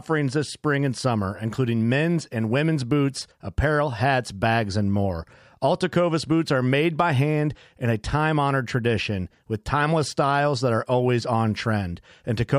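Listening closely to the speech, nothing stood out as a technical problem at any point.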